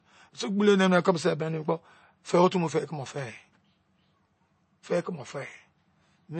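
All the way through, the speech stops dead at 8.3 kHz and carries a plainly audible watery swirl with smeared attacks. That's likely MP3 compression at a starved bitrate around 32 kbps, with the encoder chopping the treble and letting weak frequency lines flicker between frames.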